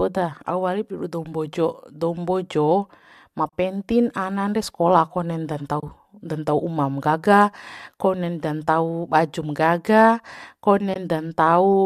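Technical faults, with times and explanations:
3.49–3.53 s, 5.80–5.83 s and 10.94–10.96 s, AAC frame loss with muting: soft dropouts of 40, 30 and 20 ms, fitting lost 10 ms low-delay frames zeroed and crossfaded.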